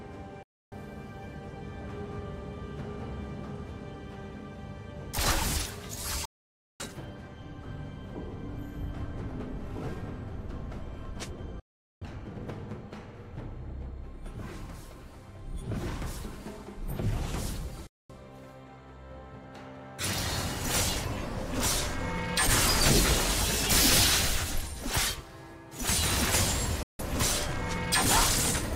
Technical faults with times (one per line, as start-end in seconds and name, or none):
0.43-0.72 digital broadcast dropout
6.25-6.80 digital broadcast dropout
11.60-12.02 digital broadcast dropout
17.87-18.10 digital broadcast dropout
26.83-26.99 digital broadcast dropout